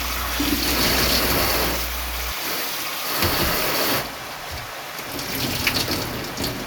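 A ground loop or a nearby transformer leaks the 60 Hz power line into the signal path from the start to 2.32 s. The result is a steady, low mains hum with some low harmonics, sitting only about 10 dB below the sound itself.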